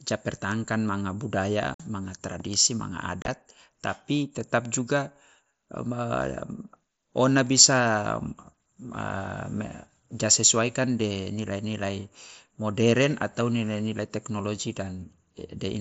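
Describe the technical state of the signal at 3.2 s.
At 3.22 to 3.28 s there is unconcealed Bluetooth headset packet loss. Voice packets from the headset were dropped and replaced with silence or an idle pattern. About 45 ms vanish across 60 ms, the longest gap 30 ms. The speech has short holes with abrupt edges.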